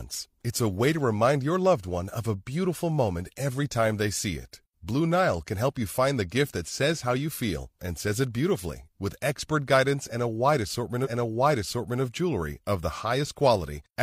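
At 11.01 s there's a stream segment repeated: the player queued the same chunk of speech twice, so just under a second (0.98 s) plays again through 11.99 s, with a small blip right where it jumps back.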